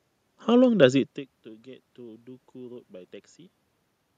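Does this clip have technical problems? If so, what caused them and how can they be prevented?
No, the only things audible are the room's background noise and a level change around 1 s as the talker shifts position at the microphone, neither of which is a system fault, so there is nothing to prevent.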